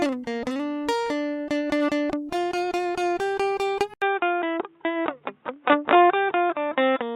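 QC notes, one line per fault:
3.94 to 7.16 s, input switched to a poorer device: after a gap of about 80 ms the music turns dull and boxy, with nothing above 3.8 kHz, while loudness stays roughly the same. A faint new noise sits far below the music. The cause is likely a change of capture device partway through, to a band-limited microphone or a headset's call profile, whose narrow band and own noise floor then carry the rest of the recording.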